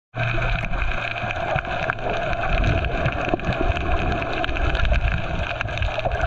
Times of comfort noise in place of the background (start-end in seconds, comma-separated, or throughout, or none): none